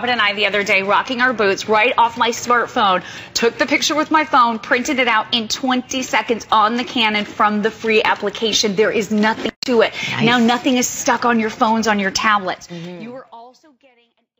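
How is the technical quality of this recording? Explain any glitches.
Nothing here counts as a glitch, and the gentle fade-out that begins around 12.5 s and closes at 14.4 s is just a smooth, editor-style ending.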